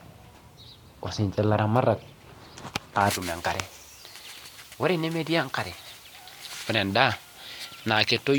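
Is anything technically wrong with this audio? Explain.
Yes. From 3.11 s to the end at 8.38 s, pre-emphasis is left on. The treble boost was applied, following a J.17 curve, but the matching de-emphasis never followed. Highs sit about 11 dB up at 10 kHz. The speech turns thin, bright and sibilant.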